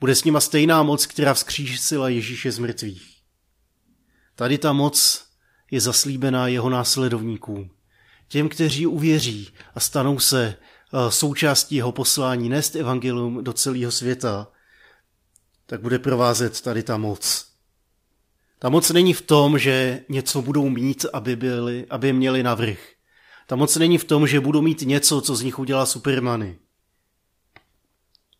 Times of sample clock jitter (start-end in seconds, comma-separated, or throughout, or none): 15.85-21.31